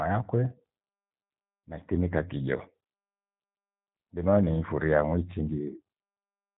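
From start to finish, the speech carries G.729 codec damage, plainly audible. Everything above 4 kHz is missing. The voice is rebuilt from a vocal tract filter, pitch prediction and sparse pulses, which fits about 8 kbit/s. It sounds rough and synthetic.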